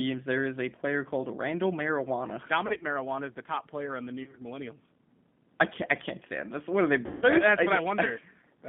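Throughout, the speech is thin and slightly rough and synthetic, confined to a line band of about 150 Hz to 3.5 kHz. That is the G.729 codec, which fits an 8 kbit/s stream rebuilding speech from a vocal tract filter, a pitch predictor and sparse pulses.

From 2.67 to 2.85 s, just before "is the top player", the sound smears into brief buzzy or noisy, fading fragments. From 4.24 to 4.40 s the same happens, and from 7.06 to 7.28 s, after "are they", a longer buzzy or noisy stretch fades out. This is VoIP packet loss concealed by the speech codec. The decoder extended its last pitch and filter with falling gain to cover the gaps, and the speech stays weakened for a moment after each one. The sound points to about 80 ms lost over 140 ms in short runs in the first event, about 70 ms over 120 ms in the second, and 160 ms lost in the third.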